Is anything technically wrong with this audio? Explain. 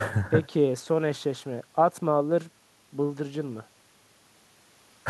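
No, nothing technically wrong can be heard in this speech recording. The audio continues without any event that would call for a technical explanation.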